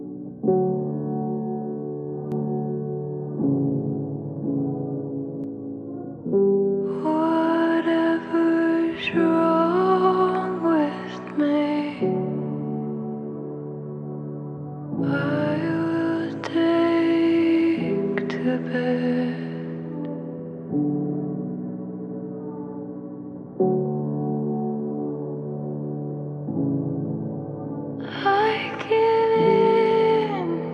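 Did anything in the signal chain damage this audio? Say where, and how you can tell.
Yes: a doubled audio track from 2.32 to 5.44 s. A full-band copy trails the original by about a second, a few dB quieter, with no decay or room colour, and starts and stops abruptly, likely an edit or second capture path holding two out-of-step copies.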